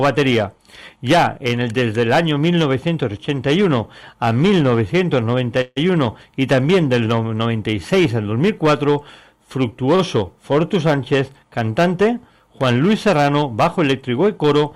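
At 5.61 to 5.92 s a call audio freeze puts a hole in the stream, likely from packets held up in transit: the last sound continues as a fading buzz or hiss for about 150 ms, then resumes with the audio delayed. At 9.96 s a shorter stall from a late packet stretches the last sound by just 32 ms, a brief held sound rather than a fading gap.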